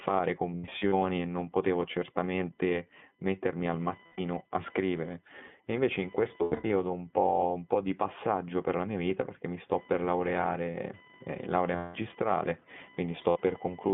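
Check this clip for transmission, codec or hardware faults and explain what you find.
Three faults are present: a computer activity noise, iLBC codec coloration throughout the speech, and five bursts of lost iLBC frames.

Computer activity noise runs the whole clip. Processor and peripheral load disturbs the shared audio ground, producing a faint buzz pulsing around 1 kHz, far below the speech. A spectrogram shows a thin line there.

iLBC codec coloration is also constant. The speech is confined to about 150 Hz to 3.5 kHz, with a rough, synthetic edge that fits a 15.2 kbps, 20 ms-frame coder. The spectrogram shows a hard ceiling near 3.5 kHz.

Lost iLBC frames occur at 0.56–0.94 s (before "e non potevo certamente"), 4.06–4.21 s (between "potevo certamente mettermi al" and "a scrivere"), 6.38–6.70 s, 11.76–11.96 s (after "per laureare eh laurea") and 13.30–13.38 s. In each gap the decoder repeats the last pitch cycle mixed with noise, so the speech turns into a held, buzzy vowel. 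The first and third gaps are broken into several shorter runs. On the waveform these gaps appear as repetitive periodic stretches, and normal speech returns immediately afterwards.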